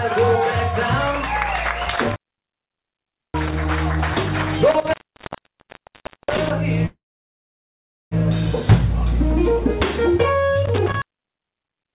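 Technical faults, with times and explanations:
1.85–3.65 s, 4.71–6.51 s and 10.66–11.96 s, intermittent contact: a loose connection opens for about 1.2, 1.3 and 1.1 s, with crackle at each edge and faint hiss inside, unlike a clean, silent dropout.
6.86–8.14 s, call audio freeze: the sound stretches into a fading buzz or hiss, then about 1.1 s of silence, likely from a starved jitter buffer, and resumes without losing anything.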